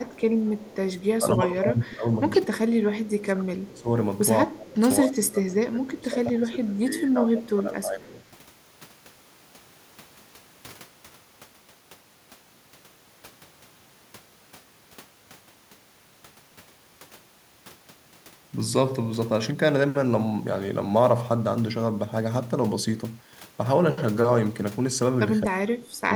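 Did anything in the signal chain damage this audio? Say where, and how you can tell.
Yes, at the call-processing stage. Between 0.06 and 0.21 s and again from 0.39 to 0.76 s there is an echo leak: a faint copy of the speech about 226 ms late and about 25 dB down. It is likely a loudspeaker echo canceller letting residue through. A single discrete repeat, not a smeared tail, rules out room reverberation.

The same stage shows speech suppressed in double talk at 1.11–2.09, 2.44–3.90, 4.47–4.81 and 5.04–8.16 s, where the level ducks by about 20 dB, and at 25.43–26.12 s, about 35 dB. The likely cause is the canceller attenuating both talkers at once. Level dips like these differ from packet loss, which tends to click or warble.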